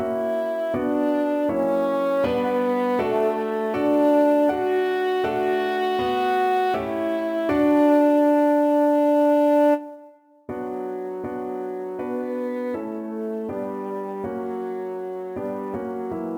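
Sample clock jitter runs through the whole sound: timing errors of a few microseconds smear each sample, leaving a hiss-like roughness about 35 dB below the signal. On a spectrogram it shows as a raised high-frequency floor under loud, bright passages, disappearing in silent gaps.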